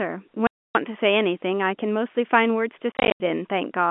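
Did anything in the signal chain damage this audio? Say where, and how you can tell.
Yes: network packet loss filled with silence, hard-edged holes at 0.47 to 0.75 s and scattered gaps from 2.92 to 3.2 s, in steps suggesting 10 ms packets.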